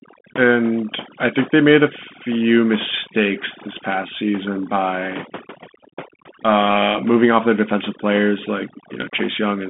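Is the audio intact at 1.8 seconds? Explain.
No. At 1.8 s the speech carries overdone noise removal, present throughout the clip. The suppressor drives individual frequency bands down or off wherever they sit near its noise estimate, and the quieter parts of the voice are cut along with the noise. The gaps fall to near silence sprinkled with twinkling specks. A spectrogram shows a blotchy, patchy texture, with isolated bright dots scattered across an otherwise empty floor.

The same moment also carries the Bluetooth CVSD headset codec, again throughout. This codec sends one up-or-down bit per sample with an adapting step size, which fits a 64 kbit/s link. The band runs roughly 200 Hz to 3.5 kHz, and nothing passes above 3.7 kHz. Loud transients outrun the step and distort, s sounds turn scratchy, and a granular hiss sits under the speech. On a spectrogram everything above 3.7 kHz is blank, with a hard ceiling and a grainy noise floor below it.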